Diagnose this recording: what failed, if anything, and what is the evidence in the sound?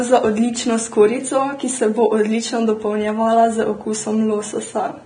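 Codec stage. The speech is hissy and grainy throughout, with nothing above 9.7 kHz. Likely cause: low-bitrate Vorbis compression turning quantised treble into noise.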